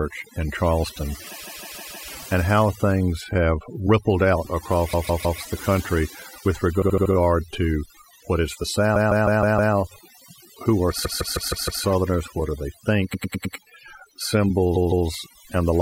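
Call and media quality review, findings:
Overdone noise removal, whole clip: noise suppressor set too aggressive, gating bands near its noise estimate along with low-level speech energy. Background drops with twinkling specks.

Repeated frames, seven points: 1.43–2.05 s, 4.93–5.40 s (after "things have rippled out"), 6.81–7.12 s, 8.95–9.73 s, 11.04–11.82 s, 13.13–13.55 s, 14.75–15.06 s. Compressed frames replayed: about 157 ms blocks (78 and 105 ms at 6.81 and 13.13 s) looping 2–5 times. Stutter; timeline stretched.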